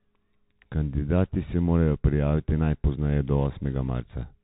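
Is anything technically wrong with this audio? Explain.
Yes. Throughout, the speech passes through a Bluetooth CVSD headset codec, most likely a 64 kbps link. Its one-bit delta steps lag loud, bright sounds, so these distort; nothing above 3.8 kHz survives, s sounds turn scratchy, and a granular hiss sits underneath.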